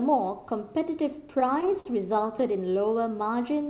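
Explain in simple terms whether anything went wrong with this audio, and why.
Between about 1.4 and 2.44 s the speech stumbles and drags, catching a dozen times in quick succession. These are repeated stalls (stutter): the call's audio arrived late, so the receiver kept stretching the last sound, up to about 50 ms at a time, until more arrived. Nothing is lost, only delayed. The call line's limit of nothing above 4 kHz is a separate, normal trait.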